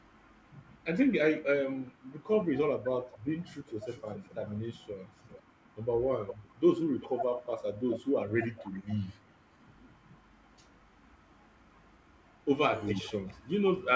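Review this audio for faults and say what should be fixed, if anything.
Between 1.4 and 9.59 s, and again from 12.92 s to the end, the speech dips by up to about 15 dB, in patches totalling roughly 3 s in the first span: speech suppressed in double talk, likely from an echo canceller ducking both talkers at once. Better double-talk detection, or a canceller that converges fully before suppressing, would prevent it.

From 3.42 to 9.11 s a faint copy of the speech trails about 0.4 s behind, around 15 dB down, and returns from 12.9 s to the end at about 20 dB down. This is an echo leak, likely a far-end loudspeaker echo that the canceller didn't fully remove. A headset or a properly tuned echo canceller on the loudspeaker side would stop it.

The band ends at 8 kHz, which fits a G.722 call path.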